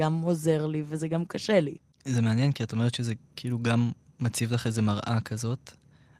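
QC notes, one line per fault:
No faults were found in this speech clip. There is nothing here that needs a timed entry.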